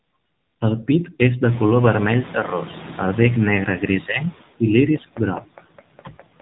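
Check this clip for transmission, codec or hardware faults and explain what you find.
Three faults are audible in the speech: a noise suppressor that leaves artifacts, a narrowband mobile codec, and a moment where that suppressor falls behind a jump in background noise.

Noise suppressor artifacts run through the whole clip. The suppressor estimates the steady background frame by frame and cuts the bands it judges to be noise by about 20 dB. The residue does not sit still. It drops away in the gaps and swells back under the speech.

The AMR narrowband mobile codec also affects the entire clip. Its damage is plainly audible, and the sound fits the 7.4 kbps mode of AMR-NB. The codec rebuilds speech from a vocal-tract model driven by sparse pulses at 8 kHz sampling, so nothing above 3.8 kHz survives. Sibilants and airiness are gone. At this low rate the voice turns buzzy and synthetic, and whatever background remains is smeared into a swirling texture.

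The noise suppressor catching up is heard from 1.47 s to 3.46 s, starting just after "pit és de". Around 1.5 s the room noise jumps by about 20 dB, and the suppressor's noise estimate has not yet adjusted. At first the new noise is reduced by only about 4 dB, so it comes through almost untouched. Over the next 1.99 s the estimate adapts, and the noise sinks down to the deeper suppression heard in the rest of the clip.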